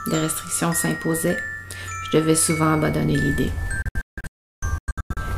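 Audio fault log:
3.82–5.17 s, digital broadcast dropout: the receiver keeps losing its grip on the signal here, muting whenever frames arrive corrupt and coming back once good ones get through. You hear a string of short holes rather than one gap, about 928 ms of silence scattered across roughly 1.3 s, the longest stretch about 352 ms. Each cut drops out with a very quick 3 ms fade, and the hole sizes fit frames of about 32 ms going missing. Whatever aired during those holes is simply gone.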